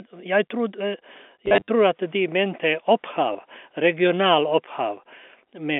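From 1.46 to 1.68 s, and again briefly at 3.33 to 3.35 s, the speech stutters robotically with a 100 Hz buzz. This is packet loss with the last packet repeated: lost packets were replaced by replaying the previous one, which fits 10 ms packets.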